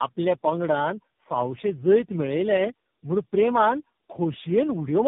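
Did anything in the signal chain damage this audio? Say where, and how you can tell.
Yes. The damage is at the codec stage, throughout the speech: tandem speech coding. It sounds rough, muffled and warbly in a way one low-bitrate coder wouldn't produce, which points to several speech codecs in a row, likely ending in narrowband AMR-NB. Each coder re-encodes the previous one's errors, so artefacts stack. A spectrogram shows nothing above 3.6 kHz, with smeared, blotchy harmonics and patchy noise between them. The waveform looks normal.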